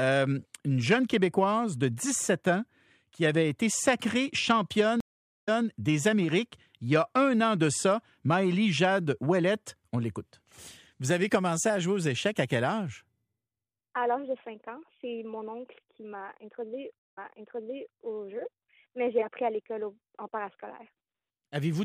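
Two stream reconnects, at 5.00 s and 16.99 s. The connection drops, giving 440 ms and then 124 ms of silence, and a fresh decoder resumes 0.21 s and 0.84 s back, repeating audio.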